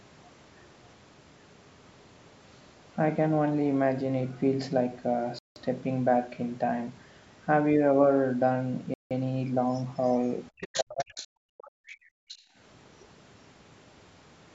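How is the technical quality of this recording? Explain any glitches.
There are several audible glitches in this speech recording, clustered around the middle and end, with the band topping out at 8 kHz as you'd expect from call microphone processing.

Bluetooth stall: the audio drops to silence at 5.39 to 5.56 s and again at 8.94 to 9.11 s, about 170 ms each time. It sounds like the headphone buffer ran dry, likely because interference held up packets, so playback paused and then carried on.

Other side's voice leaking through: from 10.58 to 11.27 s a second voice is audible, only about 10 dB under the talker. Shorter scraps follow at 11.58 to 11.70, 11.86 to 11.97 and 12.28 to 12.38 s, around 20 to 25 dB down. It's likely loudspeaker sound the echo canceller didn't fully remove.

Speech suppressed in double talk: between 10.73 and 11.17 s, right while that leak is loudest, the talker's own voice gets pushed down hard, around 35 dB at worst, for roughly 400 ms. 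That's likely the echo canceller failing to separate the two voices and turning both down.

Background gated by the echo canceller: from 11.45 to 12.56 s the room sound drops out for about 700 ms in total, as deep as about 40 dB. The canceller is clamping the microphone while the loudspeaker plays, and the background comes back when it lets go.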